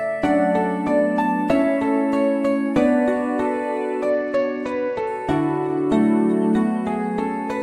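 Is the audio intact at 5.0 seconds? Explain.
No. At 5.0 seconds the audio is inside a Bluetooth SBC bit pool drop running from 4.10 to 5.07 s. The link fell back to far fewer bits, which fits roughly 84 kbps. The top sub-bands starve, so the treble dulls and gritty noise rises.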